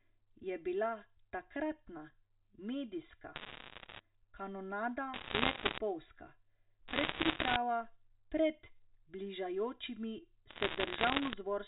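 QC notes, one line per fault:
Throughout: channel delay (comb filtering). The speech sounds hollow and phasey, with a thin, notched colour that never changes. One channel arrives roughly 3 ms late and the two are summed to mono, so shared content cancels at evenly spaced frequencies starting near 150 Hz.
3.36–4.0 s, 5.14–5.78 s, 6.88–7.56 s, 10.5–11.34 s: bit errors on a digital phone line. Bursts of sharp ticks and crackle sit over otherwise intact speech. The first burst starts just after "je bila takratna medijska". Flipped bits on the G.711 line corrupt single samples, and sign or high-bit hits click hardest. The error rate is about 1.5% in the first and last bursts and about 3% in the middle two, which crackle more densely.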